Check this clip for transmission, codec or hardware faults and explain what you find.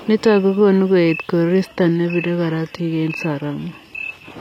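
One transmission fault is present: the adaptive stream drops to a lower bitrate from 1.66 s, just after "kokonuu koet", and stays there to the end. The player switched to a cheaper encoding when throughput fell, and the sound points to a change from roughly 96 kbit/s AAC-LC to about 20 kbit/s HE-AAC. Quality changes abruptly with no gap. The treble turns hissy and synthetic because it is rebuilt from the lower band, and nothing reaches above 14.9 kHz. On a spectrogram the upper band becomes smeared and patchy at the switch point, with a hard ceiling at 14.9 kHz. The waveform stays continuous.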